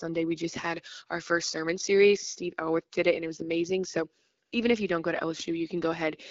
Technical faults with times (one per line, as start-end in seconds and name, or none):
4.45-4.51 AMR comfort noise